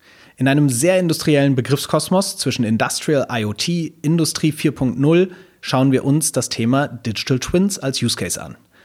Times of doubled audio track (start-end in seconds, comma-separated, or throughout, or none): none